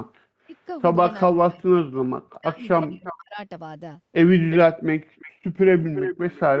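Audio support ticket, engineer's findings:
Speech suppressed in double talk, 0.44–0.55 s: short dip in the speech, down about 30 dB for roughly a tenth of a second. Likely echo canceller ducking the near talker while far end was active. 1.32–3.39 s: speech suppressed, drops as deep as about 40 dB, around 1.5 s lost in total. Same mechanism: the canceller can't separate the talker from loudspeaker echo and attenuates both.

Echo leak at 2.82–3.13 s, 4.5–4.57 s, 5.19–5.32 s, and 5.81 s to end: delayed copy of the speech trailing by 354 ms, sitting about 15, 10, 25 and 10 dB below the direct sound respectively. Last stretch is the longest. Likely loudspeaker-side echo canceller leaving residual echo that is returned into the call. Band tops out at 8 kHz from call mic processing.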